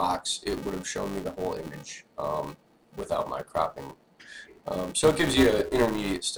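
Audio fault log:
throughout: filter restarted on every block. The filter loses its state at each block boundary and restarts from zero, leaving a small transient every block. These ticks repeat at 345 Hz, which fits a 128-sample block, and swell and fade with the level, unlike steady mains hum.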